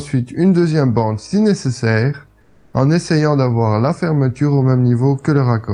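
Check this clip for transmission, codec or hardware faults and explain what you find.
One fault stands out. Comfort noise in place of the background runs from 2.41 to 2.73 s, a 320 ms stretch. The sender likely stopped transmitting while its detector judged the input silent, as in Opus discontinuous transmission, and the receiver filled the gap with generated noise roughly matched to the background, which sits about 37 dB below the loudest parts. The real ambience gives way to a smooth, featureless hiss about 2 dB quieter until the sound resumes.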